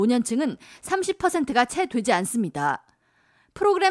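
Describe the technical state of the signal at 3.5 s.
At 3.5 s the speech signal is intact, with no audible dropout, distortion, glitch or other technical fault at that moment.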